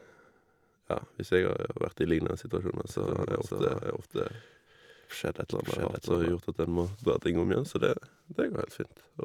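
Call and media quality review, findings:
Doubled audio track, 2.9–6.32 s: full-band second copy about half a second behind, a few dB quieter. Abrupt on/off, no decay or room colour, so not acoustic echo. Likely a second capture path or an out-of-step edit.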